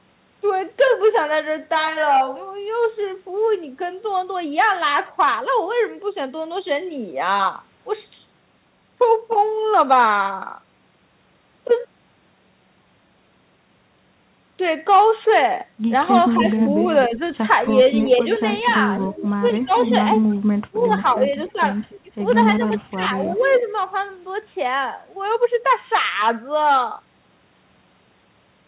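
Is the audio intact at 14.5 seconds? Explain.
Yes, the audio at 14.5 seconds is intact, carrying only the narrow telephone-band sound of the call path, with nothing above 4 kHz.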